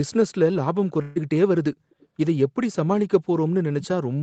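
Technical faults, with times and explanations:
1.01–1.18 s, burst of packet loss: about 140 ms of audio never arrived, and the receiver covered the gap by stretching the last sound and fading it, so a held buzz or dimming hiss precedes a jump forward. A spectrogram shows frozen, dimming harmonics, then an abrupt pattern change; the waveform shows a repeating, shrinking cycle.
1.91–2.07 s and 3.83–3.87 s, echo leak: faint scraps of the speech return 278 ms late, about 35 dB below the speech in the first stretch and about 20 dB below in the second. The likely cause is a loudspeaker on the other end whose pickup the echo canceller did not fully remove. A spectrogram shows a weak copy of earlier harmonic patterns shifted 278 ms later; the waveform barely changes.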